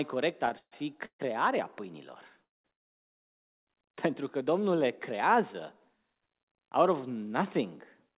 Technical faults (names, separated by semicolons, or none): repeated stalls (stutter); call audio freeze